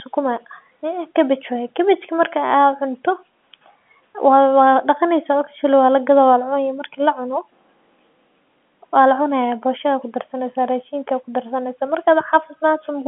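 Faint, evenly spaced ticks run through the speech from 0.40 s to 12.94 s, about every half second, around thirty in all. These are clock slip clicks, likely from two unsynchronised clocks drifting apart by roughly 50 ppm, so a single sample is dropped or repeated each time.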